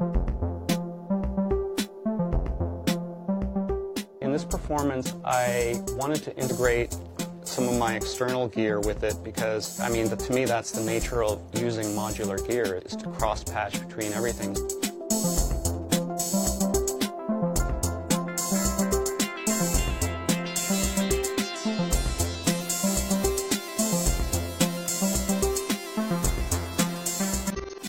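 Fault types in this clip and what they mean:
Damaged data in a compressed stream: at 22.57 to 22.62 s and again at 27.50 to 27.80 s, stretches of the encoded data were corrupted, so the decoder misread those frames, lost its place in the stream and had to hunt for the next valid frame header before it could resume. The first event is a brief 50 ms blip, while the second lasts about 0.3 s, near the very end of the audio.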